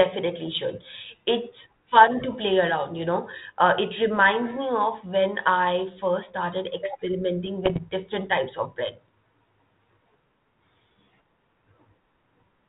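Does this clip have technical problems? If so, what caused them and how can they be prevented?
Yes. Bit errors on an ADPCM link hit from 7.65 to 7.79 s, as pops and rough bursts with brief level jumps. Each flipped bit corrupts the decoder's step size and predictor, so the damage keeps ringing for milliseconds, which fits an error rate somewhat under one percent. Better radio coverage, less interference, or error protection on the link would prevent it.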